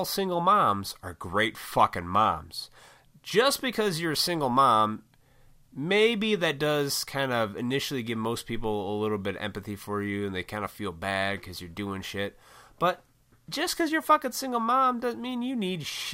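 No technical faults can be heard at any point in the recording.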